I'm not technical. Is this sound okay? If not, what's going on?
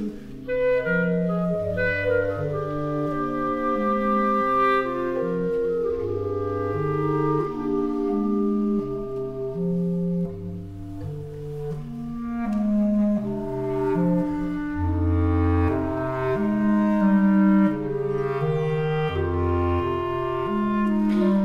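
Yes, no faults are audible.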